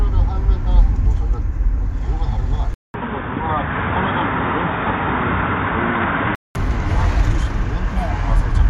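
A recording of sounds that, from 2.74 to 6.55 s, goes dull and boxy with nothing above 3.7 kHz, after a 200 ms gap, a drop of around 5 dB and a new noise floor. The likely cause is the input switched to a poorer device.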